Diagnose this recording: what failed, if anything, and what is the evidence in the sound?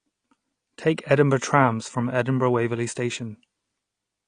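Codec stage: plainly audible damage throughout, with a hard spectrogram ceiling at 9.8 kHz. Likely AAC compression, its low bitrate, fitting 32 kbps, forcing that cut-off.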